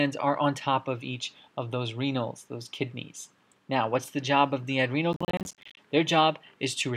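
From 5.13 s to 5.77 s the processor falls behind and cannot finish its small audio buffers in time, missing one deadline after another for about 0.64 s. This is processor overload crackle. Each missed buffer drops out as a short hole of silence with abrupt edges, and the spacing of the dropouts points to buffers of around 10 ms. Dozens of these gaps in quick succession tear through the sound as a gritty burst of crackle that stops as soon as the load eases.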